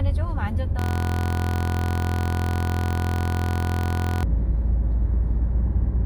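From 0.79 to 4.23 s, a system hang loop repeats one 23.22 ms piece well over a hundred times. That fits a 1024-sample buffer. It sounds like a steady 43.1 Hz buzz.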